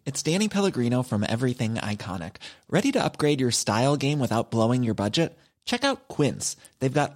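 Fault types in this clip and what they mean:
Nothing to flag here: the speech runs along without any fault worth listing.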